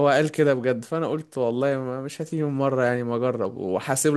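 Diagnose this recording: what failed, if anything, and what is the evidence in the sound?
Nothing seems to have failed here: there's no sign of trouble at any stage of the chain, and the speech comes through without anything to point at.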